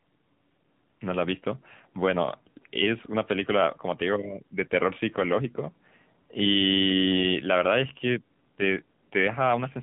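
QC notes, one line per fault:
Throughout, AMR narrowband mobile codec: nothing above 3.8 kHz survives, and pulse-driven vocal-tract modelling leaves the voice plainly buzzy, which fits a bitrate near 7.4 kbps.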